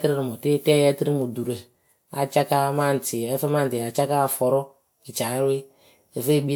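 No dropouts, distortion, glitches or level faults turn up anywhere in the recording.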